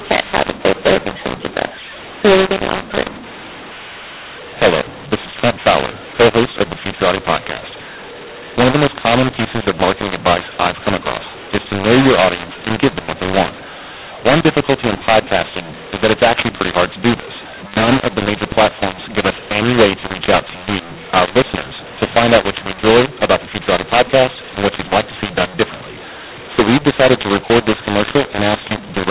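From start to finish the speech carries a mu-law and A-law mix-up: audio coded as mu-law is being decoded as A-law, which scrambles sample levels. Quiet passages rise into a noisy floor, and the speech turns harsh and distorted within the 4 kHz telephone band.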